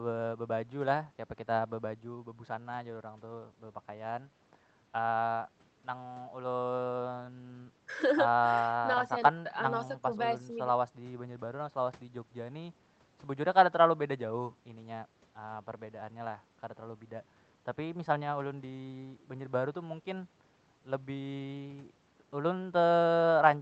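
Nothing stood out on listening to this speech, which arrives over a WebRTC call path.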